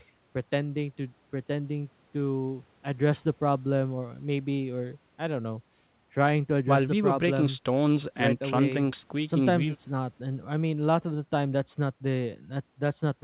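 The speech shows no technical faults, and its band limit, with nothing above 4 kHz, fits a normally working call path using G.711 mu-law coding at 64 kbps.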